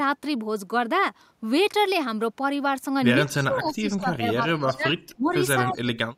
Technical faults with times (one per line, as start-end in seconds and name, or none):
3.26-3.73 echo leak
3.43-6.17 speech suppressed in double talk
4.69-4.76 echo leak
5.09-5.31 echo leak
5.76-5.80 echo leak